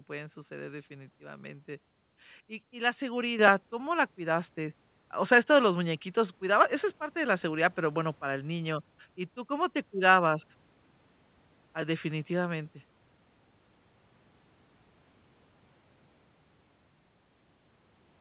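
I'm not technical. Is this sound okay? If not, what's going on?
No. At 3.39 s, right after "y y la", a microphone volume step-up happens: the software suddenly turns the microphone up, so voice and background both jump louder at once.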